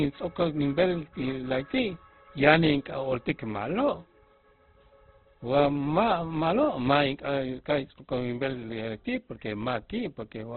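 Throughout, the speech is narrowband, rough and grainy rather than swirly, likely from heavy Opus compression in CELT mode, consistent with about 12 kbps.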